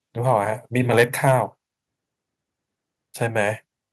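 Speech with two faults. Between 0.93 and 1.3 s the loudest syllables take on a harsh, crackly edge: microphone overload, likely from input gain driving peaks about 6 dB past the converter's ceiling, so the tops are sliced flat on a small share of samples. Unlike a limiter's smooth squashing, this adds raw distortion. At 1.02 s the voice and background together drop about 3 dB in one abrupt step. That is a microphone volume step-down, likely the call software cutting input gain in reaction to the clipping. It is an instant jump rather than a gradual fade.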